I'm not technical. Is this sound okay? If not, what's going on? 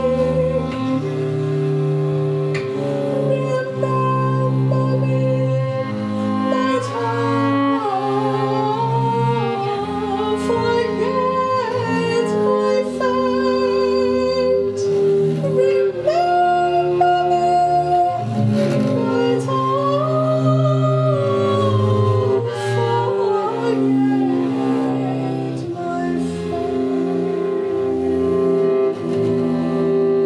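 Yes, nothing in this sound seems wrong or broken.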